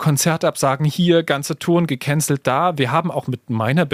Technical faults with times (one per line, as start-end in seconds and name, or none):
none